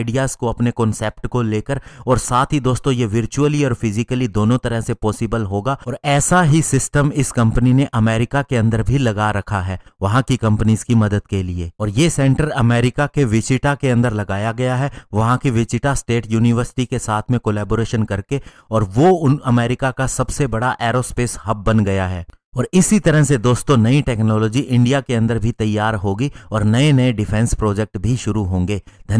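No technical faults can be heard anywhere in this audio. Nothing in it breaks, stalls or changes character at any point.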